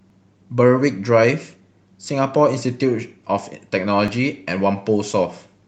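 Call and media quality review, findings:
Periodic USB or driver dropouts, 0.10 s to 4.08 s: three regular ticks, one every 2.0 s, over band-limited call audio topping out near 8 kHz. Each is a gap of a couple of milliseconds, skipped rather than silenced. Likely bus or driver stall.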